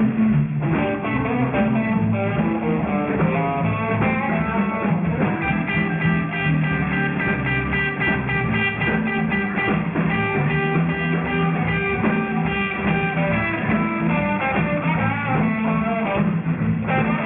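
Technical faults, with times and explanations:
Throughout, aliasing. The sound was brought down to a much lower sample rate without filtering out what lay above the new limit, which points to a drop from 48 kHz to 6 kHz. Everything above 3 kHz folds back below that point as false, unrelated tones. These sit only about 15 dB under the wanted sound, so high content turns gritty and metallic, and the spectrum stops abruptly at 3 kHz.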